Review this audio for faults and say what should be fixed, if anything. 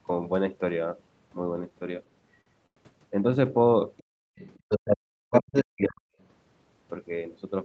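Between 1.69 and 2.78 s the audio drags in repeated stalls (stutter): four short holds, the longest 102 ms and 170 ms in total, about 16% of that stretch. Packets arrived late, the jitter buffer ran dry, and the receiver stretched the last sound each time. Nothing is lost, only delayed.

A second voice surfaces at 3.98–4.03 s (far below the talker), 4.36–4.97 s (about equally loud), 5.33–5.64 s (slightly louder) and 5.83–5.88 s (slightly quieter). This is the other side's voice leaking through, likely loudspeaker playback that the echo canceller failed to fully subtract from the microphone.

From 4.03 to 4.36 s the room sound abruptly falls away by about 35 dB for roughly a third of a second, then returns. This is background gated by the echo canceller, which clamped the microphone hard while the loudspeaker was active.

From 4.97 to 6.14 s the talker's own voice sinks deeply for around a second in total, while the far side is also heard. 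This is speech suppressed in double talk, likely caused by the canceller muting both voices when it could not tell its talker from the echo.

To prevent these, give the jitter buffer more headroom on unsteady networks, and use a headset or a better-tuned echo canceller with gentler double-talk suppression and no hard gating.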